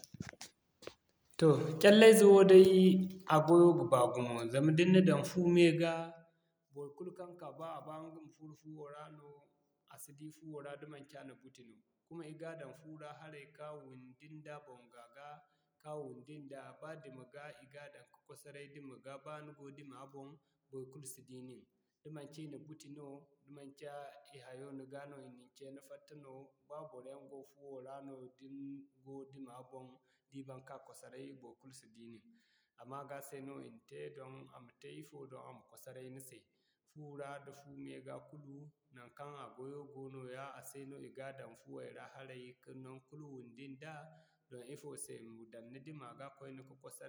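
No technical faults can be heard in this speech clip.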